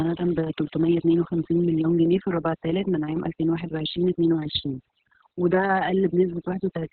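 Across the whole clip the background is near-silent, flecked with twinkling specks. This is overdone noise removal: a noise reducer set far too strong shut down individual frequency bands near its noise estimate, taking quieter parts of the voice with them.

Also throughout, the speech is muffled, hoarse and faintly robotic, with nothing above 4.5 kHz. That is Opus voice compression in its SILK narrowband mode. The heavy coarseness of the excitation points to a very low rate, roughly 6 kbps, with long frames.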